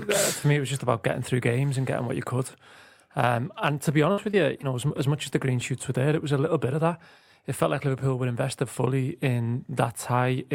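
From 4.11 to 4.92 s there is repeated packet loss with a robotic sound. Four gaps, the longest 60 ms, leave about 120 ms missing. Each is patched by extending the preceding sound, so 13% of the stretch is synthetic and it turns choppy and mechanical.

At 5.30 to 5.33 s a short concealed packet loss follows. About 20 ms failed to arrive, and the decoder filled the hole from the last sound before crossfading back, which is heard as a brief smear or wobble.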